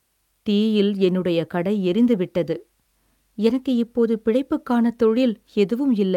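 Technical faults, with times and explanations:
Nothing technical goes wrong anywhere in this speech recording, so there's nothing to flag here.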